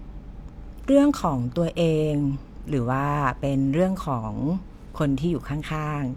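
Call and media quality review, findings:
Nothing to flag on this one: the speech came through without any audible trouble anywhere along the call or media path.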